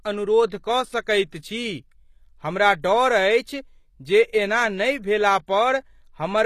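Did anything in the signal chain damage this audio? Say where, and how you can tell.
Yes. The codec stage did the damage. Throughout the speech, the treble above the low band sounds synthesised rather than captured, and there is nothing at all above about 14.9 kHz. Sibilants come out gritty and metallic, as if the top octave were pasted on. That points to HE-AAC compression at a low bitrate, likely around 24 kbps, which rebuilds the upper spectrum by copying lower bands upward, so its harmonics don't line up with the real ones.

The same codec stage causes a pre-echo from 0.50 to 0.52 s, a short hiss lasting about 23 ms just before a sharp onset. The transform spreads quantisation noise evenly across its block. Because the attack lands late in that block, noise sized for the loud part leaks into the silence ahead of it. The onset loses its crispness and sounds smeared.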